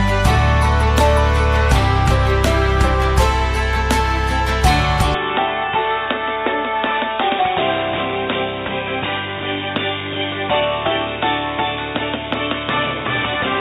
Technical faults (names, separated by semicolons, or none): input switched to a poorer device